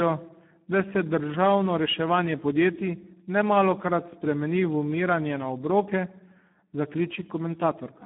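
From start to finish the speech carries Speex codec damage, and it is heavy. The voice sounds hoarse, buzzy and partly robotic, which fits a low setting of around 8 kbps where the excitation gets too few bits. The band sits roughly between 150 Hz and 3.4 kHz, with nothing above 3.8 kHz. A plain telephone filter would only sound narrow. Here the harsh, vocoder-like grain inside the band shows the codec itself is at fault.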